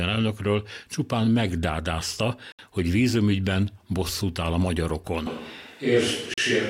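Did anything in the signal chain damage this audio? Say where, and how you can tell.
Yes. At the playback stage, a likely Bluetooth stall: the sound drops to dead silence for 68 ms at 2.52 s, between "elnökről csupán megdádázta" and "hogy vízumügyben bosszút áll", and again for 41 ms at 6.34 s. The headphone buffer ran empty while delayed packets were resent. The waveform shows flat gaps, and the spectrogram shows blank vertical strips.

At the capture stage, from 5.27 s to the end, the sound turns roomy and hollow, with thinner bass and a room-noise floor about 35 dB below the speech. The level barely changes. This is likely a switch to a distant microphone. The spectrogram shows reverberant smearing, weaker low frequencies and a raised noise floor starting abruptly at 5.27 s.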